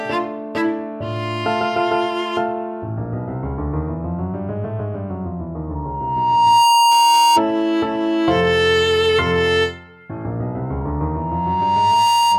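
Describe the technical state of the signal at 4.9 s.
Nothing is wrong with the signal at 4.9 s; the audio runs intact through that moment, with no dropout, distortion or other technical fault.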